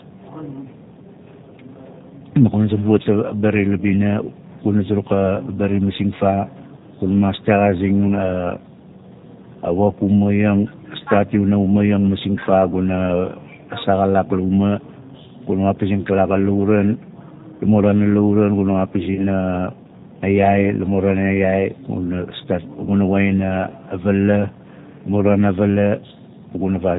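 From the very start, the speech carries the sound of the G.729 codec, here the G.729A flavour at 8 kbit/s. It rebuilds the voice from a vocal-tract filter, a pitch predictor and a handful of pulses per 10 ms frame, so there's nothing above 4 kHz, and the damage is plainly audible: the voice comes across rough and a bit synthetic, with a modelled edge rather than a natural recorded tone.

Around 19.15 to 19.20 s there's a short stretch of VoIP packet loss concealed by the speech codec. About 20 ms of audio went missing, which fits a single lost packet. Instead of silence, the decoder carried on from its last pitch and filter settings at falling gain, so you hear the sound smear into a brief patch that sags in level. Because each frame builds on the one before, the voice sounds weak or distorted for a moment after the gap.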